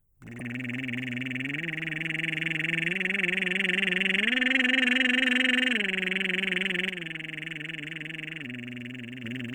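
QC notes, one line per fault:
0.35–0.41 s, damaged data in a compressed stream: a short glitch of about 54 ms breaks into the music. Part of the compressed stream here was corrupted, so the decoder could not read those frames correctly. It lost sync and produced garbage until it found the next valid frame header, where normal playback resumed.
6.89–9.24 s, sudden gain jump: the whole mix drops abruptly by about 6 dB at 6.89 s. The music and its background noise fall together, with no fade, and both return just as abruptly at 9.24 s. Because the change happens between one sample and the next rather than over a ramp, the likely cause is a digital gain setting or a one-bit shift applied instantly and later removed the same way.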